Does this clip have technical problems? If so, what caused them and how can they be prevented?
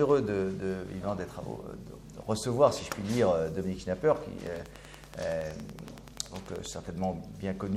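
Yes. A train of clicks runs from 4.47 to 6.67 s, most likely from electrical interference from nearby equipment or a faulty connection or power supply, injecting a short pulse into the signal about 10.5 times per second. The pulses arrive at a regular pace, around twenty of them, each with much the same shape and standing well above the level of the audio. They come through as a steady ticking laid over the sound, audible even in pauses. To prevent it, keep the recording chain away from switching power supplies and other noisy gear, use shielded cables, and check connections and power supplies for faults.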